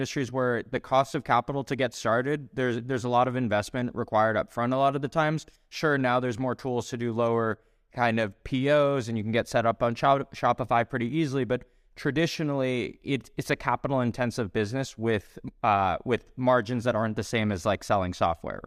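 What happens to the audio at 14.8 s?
At 14.8 s the speech carries on intact, with no audible fault at that moment.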